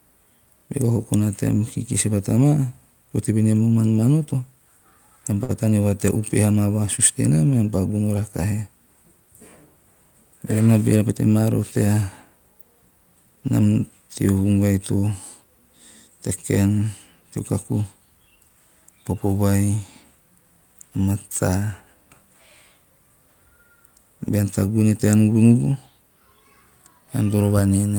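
At 5.43 to 5.51 s, a short stall from a late packet: the jitter buffer ran dry, so about 55 ms was stretched from the preceding sound, held unnaturally long with nothing lost. From 10.59 to 11.07 s, just before "pete maa roho", a jitter buffer speed-up trimmed roughly 70 ms of pitch periods, so the speech briefly runs about 12% fast and sounds hurried.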